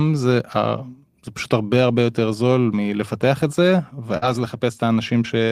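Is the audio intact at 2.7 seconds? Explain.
Yes, the speech at 2.7 seconds plays through cleanly with no audible fault.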